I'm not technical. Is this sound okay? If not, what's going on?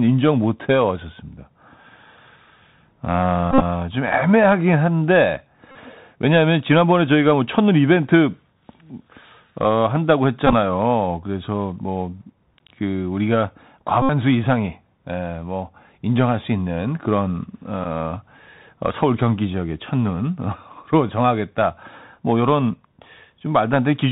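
No. The recording has two faults.

Bluetooth CVSD headset codec, throughout the clip: the speech went through the basic call mode of a Bluetooth headset. This method rebuilds the sound one tiny up-or-down step at a time, and it drops everything above 4 kHz. The result is dull, muffled speech. S sounds come out scratchy, loud bright moments distort, and a fine grainy hiss sits under the speech the whole time.

Bluetooth headset packet repeated, at 3.51 to 3.61 s, 5.72 to 5.76 s, 10.47 to 10.54 s, 14.02 to 14.10 s, and 17.84 to 17.86 s: small chunks of sound going between headset and phone went missing. The headset filled each gap by playing the previous chunk again. When this happens several times in a row, the repeats form a short, steady buzz near 267 Hz. At 3.51 and 14.02 s these buzzes are the longest.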